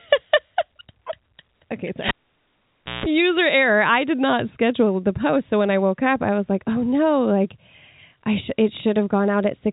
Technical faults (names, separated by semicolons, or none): cable pulled and plugged in